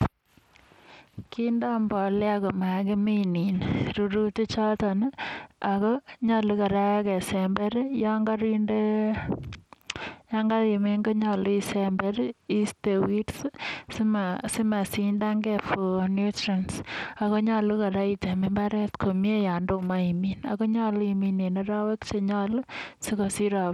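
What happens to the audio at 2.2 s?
At 2.2 s the speech carries Bluetooth SBC compression damage, which runs through the whole clip rather than starting there. The likely cause is a Bluetooth link using the SBC codec at a starved setting, one that fits a bitrate of roughly 96 kbps. With so few bits spread across its wide sub-bands, the upper bands are dropped or coarsely coded, so the treble thins and flickers while a gritty, grainy haze and aliasing sit plainly audible on the speech.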